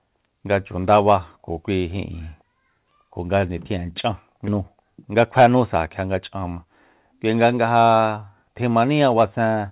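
Skip ahead at 4.48 to 4.59 s: roughly 0.4 s of speech was dropped while later audio waited, so playback jumps forward with almost no gap.

Jitter buffer speed-up from 5.07 to 5.76 s: the receiver trimmed about 70 ms of short pitch-period pieces to reduce delay, making the speech run at 108% speed, hurried, with unchanged pitch.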